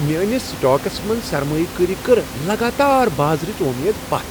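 No technical faults can be heard in this recording.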